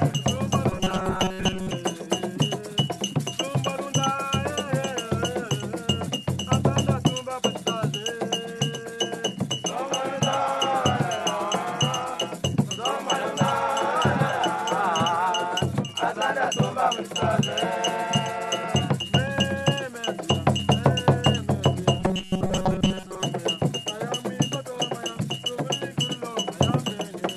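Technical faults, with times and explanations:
0.70–1.73 s: robotic sound from repeated short buffers. The sound turns into a rigid, metallic buzz at 188 Hz, likely because a chunk of about 5.3 ms kept being replayed while fresh audio arrived too slowly, so most of the material was skipped.
22.00–23.22 s: robotic sound from repeated short buffers. The same 188 Hz buzz returns. A chunk of roughly 5.3 ms is likely looped in place of most of the incoming audio, and the loop rate imposes that fixed pitch.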